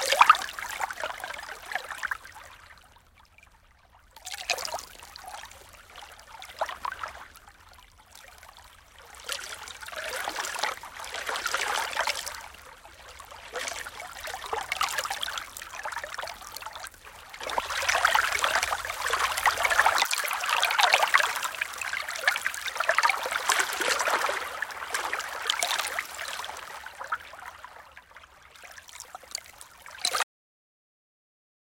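At 30.23 s comes a cut-off end: the last buffers never played, so sound halts mid-event into digital silence, a flat waveform with no decay.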